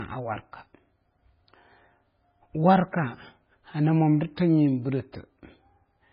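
A speech recording that was likely squeezed through a very low-bitrate MP3 encode, consistent with roughly 16 kbit/s, and then saved again as a much larger MP3 is a case of low-bitrate audio saved at a high bitrate. The second encode cannot restore what the first discarded. Throughout the clip nothing is present above 5.1 kHz, so consonants sound dull and muffled, and the smeared, watery texture left by the first encode remains audible despite the generous file size.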